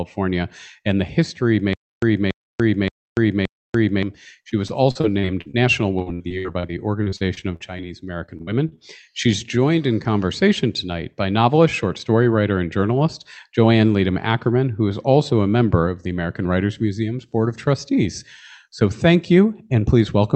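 From 1.73 to 4.03 s there is a stutter with silent gaps. A 283 ms burst plays four times, each followed by 291 ms of flat digital silence, on an even 573 ms cycle. A stalled player, likely retrying its last buffer, would produce this. The waveform shows identical blocks separated by dead gaps.

Repeated packet loss (robotic sound) follows in three stretches: 4.49–5.58 s with seven gaps, 5.99–7.82 s with fifteen, and 8.26–8.79 s with five. The gaps last up to 64 ms and are patched by extending the previous sound, which makes it choppy. The spectrogram shows smeared, frozen harmonics beneath content capped near 8 kHz by the call codec.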